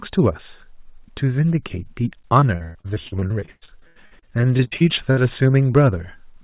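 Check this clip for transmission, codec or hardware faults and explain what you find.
One transmission fault is present. From 2.4 s to 5.2 s there is repeated packet loss, which gives a robotic sound. Twenty-five separate gaps hit the speech. The longest lasts 123 ms. Each gap is filled by stretching the last received sound, so about a third of this span is patched rather than real. The speech turns choppy, with pieces missing. Throughout the clip, the narrowband call path leaves nothing above 4 kHz, which fits a G.711-type codec.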